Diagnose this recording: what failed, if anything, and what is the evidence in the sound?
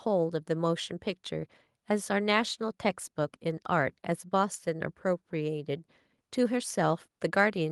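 Nothing in the signal chain has failed: the speech arrives with a continuous, stable signal and no audible disturbance at any stage of capture, conversion, transmission or playback.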